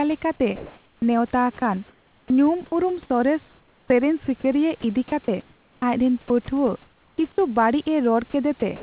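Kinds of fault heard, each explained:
Comfort noise in place of the background: From 0.56 to 1.02 s, during a pause where the background sits about 36 dB below the loudest speech, the real room noise gives way to a smooth, featureless hiss about 5 dB different in level, lasting 0.46 s. The likely cause is discontinuous transmission, with the receiver synthesising noise while nothing is sent. Unlike a dropout, the pause never falls to silence. Its texture simply goes flat until speech returns.
Onset clipped by the voice detector: At 1.0 s, where that synthetic pause ends, the next word enters abruptly, with its first 20 ms missing and comfort noise heard where the soft start should be. This is likely a voice detector that was slow to register renewed sound, so the opening never got sent. It differs from choppy detection because it is a single cut at one word's start. Sound is not repeatedly switched on and off.
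Sound chopped by the voice detector: Just after "ᱞᱮᱠᱟᱛᱮ ᱱᱮᱣᱛᱟ", from 1.6 to 2.72 s, about 0.44 s of speech edges and quiet parts are swapped for comfort noise. From 3.48 to 7.38 s the loss grows to 1.44 s, and from 8.3 to 8.62 s it falls to 0.06 s. This is likely a detector toggling transmission repeatedly, unlike one clipped onset. The narrow band, with nothing above 4 kHz, is the call codec.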